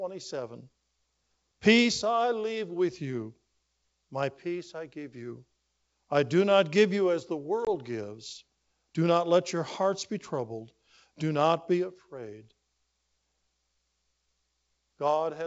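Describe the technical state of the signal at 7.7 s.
Packet loss on an ADPCM call occurs from 7.65 to 7.69 s, just after "give you as the". About 20 ms of audio, roughly two packets, drops out and is filled with silence, leaving a hard-edged hole in the G.722 wideband stream. Because the decoder's adaptive predictor and step size stop tracking the sender's during the gap, the speech resumes slightly distorted, settling over the next few tens of milliseconds.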